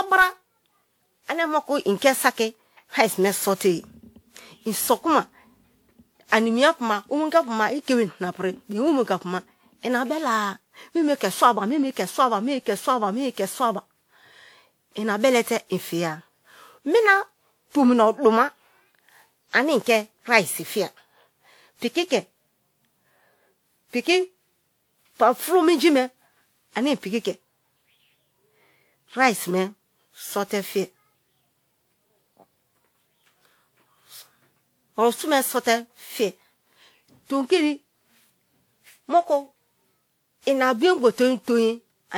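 From start to finish the speech carries generation loss: a swirly, smeared texture with a hollow sound and softened consonant attacks, more degraded than a single pass at this quality would leave. Content still reaches up to about 20.1 kHz. The likely cause is repeated lossy re-encoding, the character pointing to WMA at around 96 kbit/s applied something like seven times, with each pass requantising on a shifted frame grid so noise accumulates.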